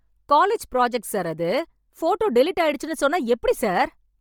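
A short speech recording carries heavy codec damage from start to finish. The sound has a breathy, grainy edge. Upper frequencies lose their detail and turn into a hiss-like wash. That points to Bluetooth LC3 compression as the likely cause. At a low rate, which fits about 32 kbps with 10 ms frames, the codec drops much of the top spectrum and fills it with noise. Nothing is present above 20.2 kHz.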